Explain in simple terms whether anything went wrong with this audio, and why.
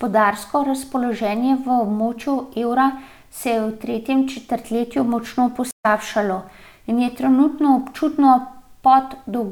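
At 5.71 s, just after "v tretjem četrtletju močno", the speech stops for about 0.13 s and resumes at 5.86 s, roughly a tenth of a second further on. This is a stream reconnect: the connection dropped, and the player reconnected and restarted mid-stream.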